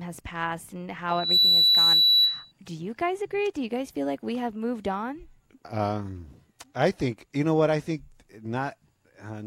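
From 1.09 s to 2.52 s, loudspeaker feedback squeals over the speech. A microphone is picking up the loudspeaker it feeds. At one frequency the loop gain rises above one, so that tone keeps reinforcing itself. Here the tone sits at 3.9 kHz. It swells from nothing to full strength in about a third of a second. It then holds as a steady, piercing squeal, roughly 10 dB louder than the speech, until it stops at 2.52 s.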